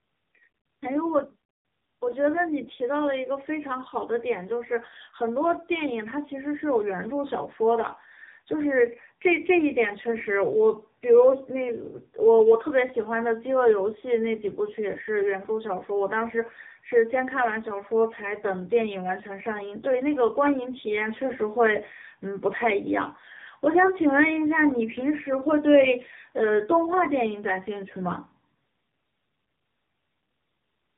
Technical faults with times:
0.00-30.98 tandem speech coding

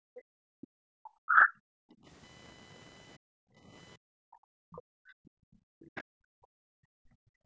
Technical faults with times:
0.00-7.45 computer activity noise
0.00-0.73 background gated by the echo canceller
0.61-0.67 other side's voice leaking through
1.01-1.52 speech suppressed in double talk
1.80-2.05 background gated by the echo canceller
3.17-3.68 background gated by the echo canceller
3.97-7.45 background gated by the echo canceller
4.72-4.81 other side's voice leaking through
5.95-6.03 other side's voice leaking through

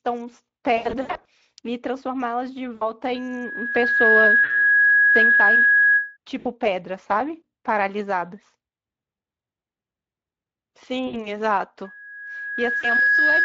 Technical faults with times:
0.77-1.26 VoIP packet loss concealed by the speech codec
2.75-2.94 VoIP packet loss concealed by the speech codec
3.14-6.17 loudspeaker feedback squeal
4.43-4.51 VoIP packet loss concealed by the speech codec
6.39-6.47 VoIP packet loss concealed by the speech codec
11.07-11.26 VoIP packet loss concealed by the speech codec
11.84-13.44 loudspeaker feedback squeal
12.80-12.87 VoIP packet loss concealed by the speech codec

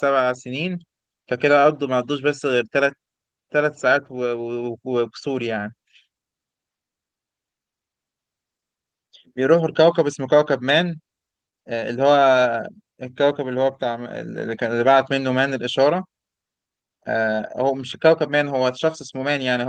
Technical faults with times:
none

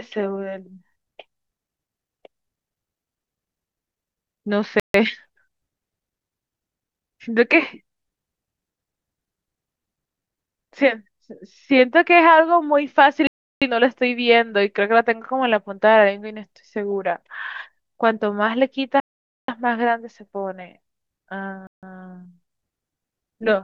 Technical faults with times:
4.80-4.94 Bluetooth stall
13.27-13.62 Bluetooth stall
19.00-19.48 Bluetooth stall
21.67-21.83 Bluetooth stall

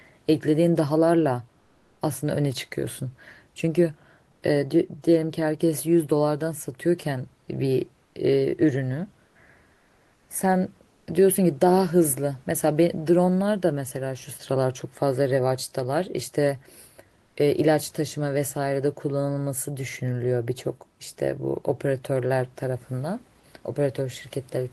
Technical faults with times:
4.31-4.43 comfort noise in place of the background
8.03-8.15 comfort noise in place of the background
9.25-9.35 comfort noise in place of the background
9.73-10.29 comfort noise in place of the background
10.89-11.07 comfort noise in place of the background
17.21-17.35 comfort noise in place of the background

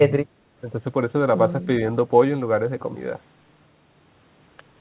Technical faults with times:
none

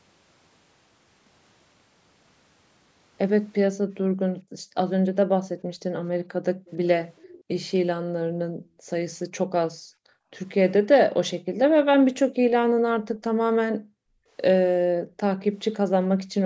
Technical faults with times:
4.02-6.66 background gated by the echo canceller
6.66-7.44 echo leak
8.04-10.32 background gated by the echo canceller
11.44-15.17 background gated by the echo canceller

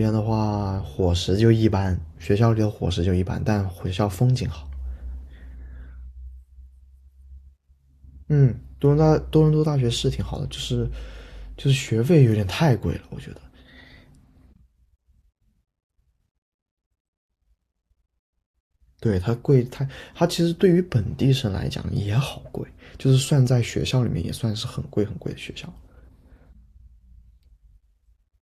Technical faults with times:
none

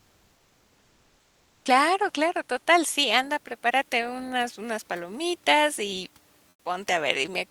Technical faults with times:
0.00-1.65 comfort noise in place of the background
6.49-6.65 comfort noise in place of the background

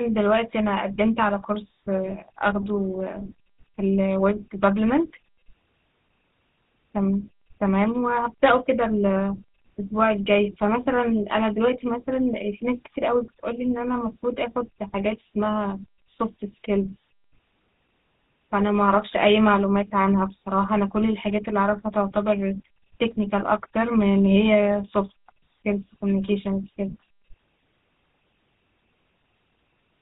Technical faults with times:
0.00-30.01 GSM full-rate codec

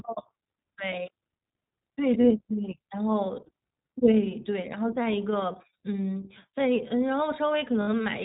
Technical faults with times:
0.00-8.24 iLBC codec
2.22-2.25 lost iLBC frames
5.52-5.56 lost iLBC frames
7.82-7.88 lost iLBC frames

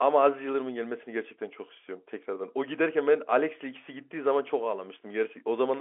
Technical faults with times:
none

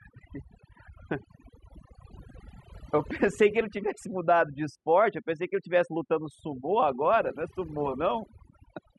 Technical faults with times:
0.00-8.99 overdone noise removal

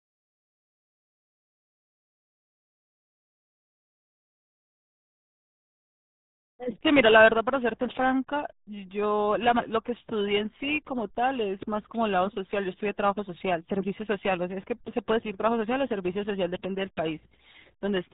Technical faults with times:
0.00-18.14 RealAudio 14.4 codec

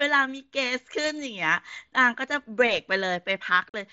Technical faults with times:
3.69-3.74 unconcealed Bluetooth headset packet loss

